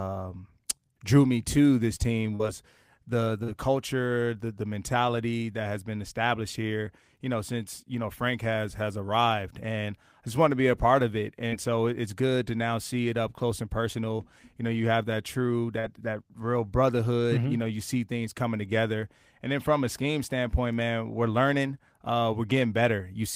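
At 2.35 s after "me to this team", 3.43 s before "culture the the mentality", 11.48 s between "a part of it" and "so it's good to", and 15.80 s, short concealed packet loss occurs. About 40 ms of speech arrived too late each time. The receiver extended the preceding sound to fill the gap, leaving a brief smear or wobble.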